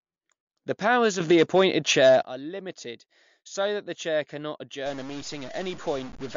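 From the start the speech sounds watery and swirly, with a metallic chirp on the s sounds, consonant attacks smeared, and nothing at all above 7.2 kHz. This is likely MP3 compression at a low rate, one that fits roughly 52 kbps. Short of bits, the encoder chops the treble at a fixed cut-off and drops weak frequency lines, which flicker in and out between frames and produce the swirling texture.

At 4.86 s, just after "that the chair cannot", a distortion takes hold and lasts to the end at 6.37 s, with noise filling the gaps where the sound should fall quiet. The likely cause is a stuck bit, one data bit held at a fixed value. Roughly half the samples are then off by that bit's weight, in a pattern that follows the waveform. Small values near silence flip the bit as they change sign, which fills the pauses with noise.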